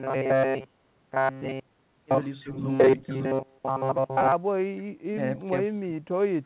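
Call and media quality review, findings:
Robotic sound from repeated short buffers, 0.01 to 4.32 s. Receive side likely starved of packets, so the playout fills gaps by looping the last segment of about 7.5 ms. Most audio in this stretch is repeats, giving a rigid, metallic 133 Hz buzz.

Speech suppressed in double talk at 2.43 to 2.6 s, 3.06 to 3.25 s and 5.43 to 5.51 s. Echo canceller likely misreads simultaneous talk as echo and attenuates the near side. The voice dips by up to about 10 dB at 2.43 s and about 5 dB elsewhere.

Echo leak, 3.02 to 3.16 s. Far-end loudspeaker pickup likely not fully cancelled and sent back. A brief, faint copy of the voice returns 308 ms late, about 25 dB below the speech, under the G.711 A-law path's 4 kHz ceiling.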